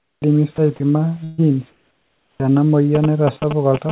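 At the very start, from 0.00 to 0.22 s, the speech gives way to a flat, steady noise before it gets going. This is sound dropped by the voice detector. The sender likely judged the quiet opening to be background and stopped sending. The receiver filled the 220 ms with synthetic noise, and about 90 ms of real sound is gone. The same thing happens twice more, briefly. At 0.56 to 0.58 s, about 10 ms of speech is lost. At 0.76 to 0.80 s, about 30 ms is lost. Each time, the sound thins into hiss and returns a moment later.

From 1.24 to 1.40 s there is a burst of packet loss. Roughly 140 ms of audio never arrived in time. The receiver stretched the last sound it had to cover the gap, and faded it as it went. The result is a held, dying buzz or hiss lasting about 138 ms. Then the speech resumes further along. The stretch in between is simply missing. There is no hard silence, just the smeared fill.

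Between 1.70 and 2.40 s the background changes character. This is comfort noise in place of the background. The sender likely stopped transmitting during the pause. The receiver played generated noise roughly shaped like the room. It is smooth and featureless, without the texture of the real background. It sits about 16 dB quieter than what came before. The real room noise lies about 40 dB below the speech, so the drop is heard as the pause going dead.

Right at the end of that pause, from 2.37 to 2.40 s, the onset is clipped by the voice detector. The detector was likely slow to notice the speech returning. So the first 30 ms of it were never sent, and comfort noise sat where they should be. The speech starts abruptly, with its soft beginning shaved off. It jumps in rather than rising.

From 2.95 s to the end, GSM signalling bursts appear. A 2G phone close by is sending short radio bursts while signalling, and the audio circuit rectifies them. 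The result is a galloping dit-dit-dit of brief buzzes at about 217 Hz. It is loud, only a little below the speech itself. Under this, the G.711 call path carries nothing above 4 kHz.

Inside that stretch, at 3.40 to 3.42 s, sound is again dropped by the voice detector. About 10 ms of speech is replaced by flat noise, likely because the detector misjudged a quiet moment. It is a tiny gap, heard as a quick dip into hiss.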